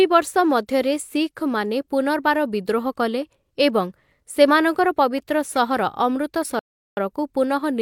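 Speech, with a rebuffering stall from 6.59 to 6.97 s: playback drained its downloaded audio, dropped to silence, and resumed at exactly the point it halted once more data arrived. Nothing is missing, but the pause adds 378 ms to the timeline.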